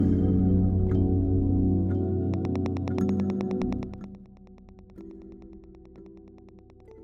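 From 2.34 s to 6.92 s a regular train of clicks ticks at 9.4 per second, peaking about 10 dB above the sound and persisting through pauses, likely from interference. Between 3.69 and 4.26 s, zipper noise appears as a roughly 20 dB level drop is applied in about 70 unsmoothed steps per second, producing denser, faster ticking that stops once the level settles.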